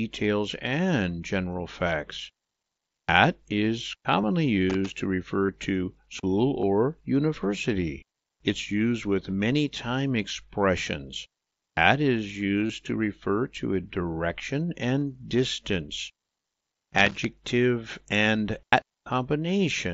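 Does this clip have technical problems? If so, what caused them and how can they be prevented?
Yes. Concealed Bluetooth headset packet loss occurs at 4.22 s, 5.46–5.49 s (just before "to school"), 6.61 s (just after "to school"), 12.67–12.70 s (just before "to refer to a"), 15.00 s and 16.41–16.44 s. In each case the receiver filled a gap of 15 to 30 ms by repeating the closest-matching recent waveform, which points to two to four lost radio frames. These runs leave a brief buzzy hold and a slight warble when live sound resumes, all over the mSBC wideband link. Keeping the phone close, with no body or obstacles in the path, and away from busy 2.4 GHz Wi-Fi prevents these dropouts.

Loose connector crackle occurs at 4.70–4.91 s and 16.98–17.25 s. A worn or dirty contact opened and closed rapidly as it shifted, chopping the signal into irregular bursts of scratchy crackle lasting about a quarter of a second each. 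Cleaning or replacing the connector and securing the cable so it cannot move prevents this.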